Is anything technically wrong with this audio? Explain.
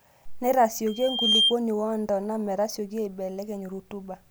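Yes, there's a loudspeaker feedback squeal from 0.87 to 1.55 s, just before "woontona metasioki". The mic is hearing its own loudspeaker, and at 3.2 kHz the loop gain tops one, so that tone swells over roughly half a second to around 10 dB above the speech.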